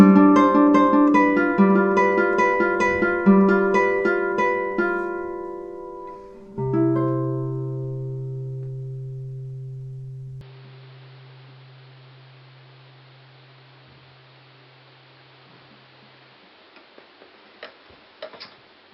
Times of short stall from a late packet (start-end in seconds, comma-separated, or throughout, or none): none